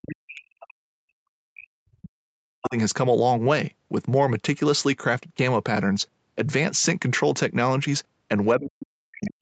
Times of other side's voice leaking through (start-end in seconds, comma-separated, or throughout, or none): 9.26-9.30